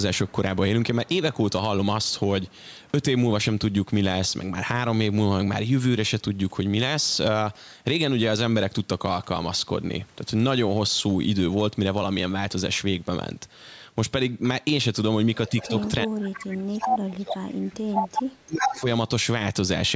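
Echo leak appears in this speech recording at 15.47 to 15.89 s, 16.80 to 16.88 s and 17.92 to 18.80 s. A copy of the speech trails the original by 347 ms, first about 20 dB below it, then about 5 dB below, and finally about as loud. The likely cause is a far end playing the call on a loudspeaker whose echo canceller let part of the microphone pickup through and sent it back.

Speech suppressed in double talk hits at 15.49 to 15.73 s with a shallow dip of a few decibels over roughly a tenth of a second. From 16.04 to 18.18 s it is far deeper, with the level falling by up to about 30 dB across roughly two seconds of pieces. A final cut of about 20 dB comes at 18.45 to 18.85 s. These drops likely came from the other side's sound playing on the loudspeaker while this side talked, which left the canceller unable to separate the two and made it turn both down.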